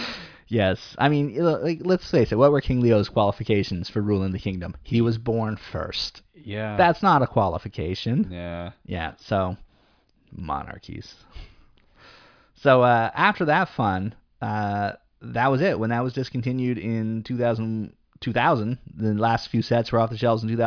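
No technical faults can be heard anywhere in the recording.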